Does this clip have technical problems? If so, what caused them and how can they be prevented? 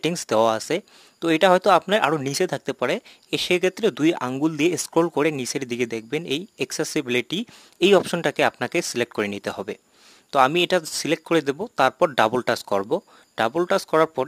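Yes. Crude rate conversion runs through the whole clip as a gritty, inharmonic fizz riding on loud and high sounds, about 25 dB below the signal. The pattern fits a 48 kHz to 44.1 kHz change made by picking the nearest sample, which drops samples at regular intervals. On a spectrogram this appears as faint, unrelated tones mirrored across the band. Prevent it by resampling with a proper band-limited, filtered converter.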